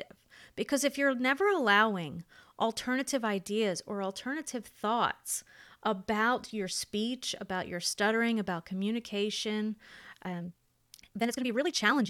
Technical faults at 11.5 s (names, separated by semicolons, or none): time-stretched section